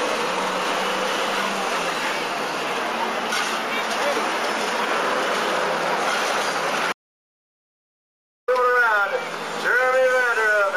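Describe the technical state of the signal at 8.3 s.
At 8.3 s the signal is in an audio dropout to silence. It runs from 6.93 s to 8.48 s, about 1.55 s in all. The sound cuts off abruptly and returns just as abruptly. In between there is silence, with no background or room tone at all. The likely cause is a lost input, such as a disconnected device, a failed link or a stray mute, while recording carried on writing silence. Whatever occurred during that gap is gone.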